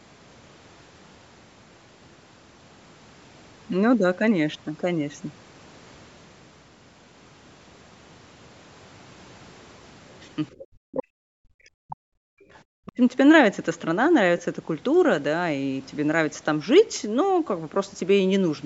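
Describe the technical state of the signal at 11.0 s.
At 11.0 s the call shows other side's voice leaking through, from 10.92 to 11.03 s. The likely cause is an echo canceller that failed to fully subtract the far end's loudspeaker playback from the talker's microphone, so a residue of that second voice was sent back out. It can be heard as a brief scrap of another voice, roughly 10 dB below the main speech, lasting only about a tenth of a second.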